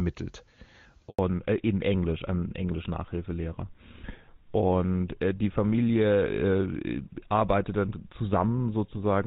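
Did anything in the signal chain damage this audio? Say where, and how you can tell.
Yes. A handover gap at 1.09 to 1.19 s is a network-stage fault: the speech fades out within a few tens of milliseconds and stays silent for 100 ms before resuming. That is the signature of the call being passed from one network to another with no speech frames delivered during the switch. Nothing is concealed or repeated across the hole, so whatever was said in that tenth of a second is simply gone.

A fallback to narrowband follows immediately, from 1.19 s to the end of the clip, at the codec stage. Before the gap, the speech carries the airy upper band of HD Voice, with AMR wideband at a high rate and at most faint coding damage. After it, nothing above 4 kHz survives, and the speech sounds duller and rougher. That sudden ceiling points to the call renegotiating down to an older narrowband codec such as GSM full rate at 13 kbit/s.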